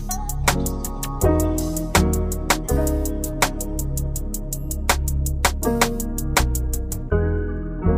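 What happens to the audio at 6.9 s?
Nothing goes wrong at 6.9 s; the audio plays through that moment intact, with no dropout, click, glitch or other fault.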